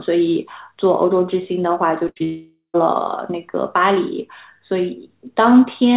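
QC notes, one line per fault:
2.08–2.18 s, burst of packet loss: the last sound is stretched and fades for about 80 ms, then the audio resumes with that stretch missing.
2.18–2.22 s, short concealed packet loss: a brief smear of about 20 ms where the receiver extended the preceding sound and blended back into the real signal.
2.24–2.76 s, long network dropout: the last sound drags on and fades for about half a second, then goes silent for about 120 ms; likely a long interruption of arriving packets.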